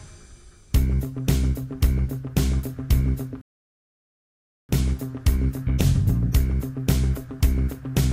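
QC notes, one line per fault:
3.41–4.69 s, rebuffering stall: the sound cuts to silence for about 1.28 s, then picks up exactly where it broke off. The player ran out of downloaded audio and waited for more data before continuing, so nothing is skipped and the pause is simply added time. A dropout or packet loss would remove material and jump ahead on return. Here the sound on either side of the gap joins seamlessly.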